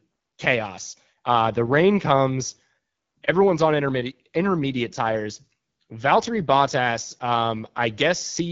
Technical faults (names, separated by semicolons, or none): AMR wideband (HD Voice) codec